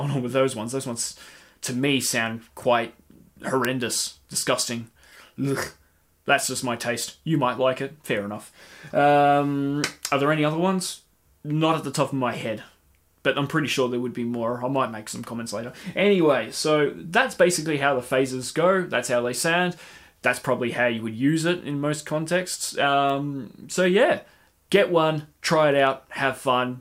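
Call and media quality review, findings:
Word clock ticks, 0.88 to 25.87 s. Receiving device free-running on its own clock, not locked to the digital link's sender; offset around 15 ppm. At each clock slip, a sample is dropped or repeated, with misread samples beside it. Result: around twenty sharp ticks of uneven strength, one about every 1.5 s, steady rate.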